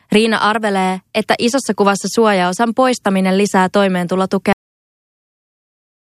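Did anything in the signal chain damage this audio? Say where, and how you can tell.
Yes, a cut-off end at the storage or playback buffer stage: the speech stops mid-sound at 4.53 s, straight into digital silence with no decay, so the final buffers never got written.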